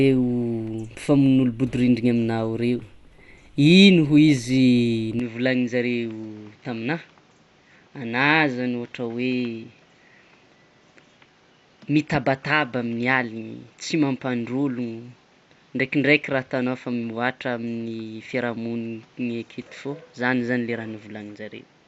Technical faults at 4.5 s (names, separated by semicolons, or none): Dolby Digital compression